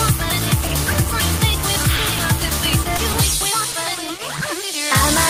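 At 0.67 s a packet arrives late and the jitter buffer runs dry, a short stall from a late packet: the receiver holds the last sound for about 20 ms, then resumes where it left off, so nothing is lost but the sound drags with a faint buzz or dip. At 1.96 s and again at 2.97 s, 20 ms of audio never reaches the decoder, a short concealed packet loss; the receiver extends the preceding sound to cover the gap, leaving a brief smear or wobble. At 3.72 s another late packet causes the same 20 ms stall.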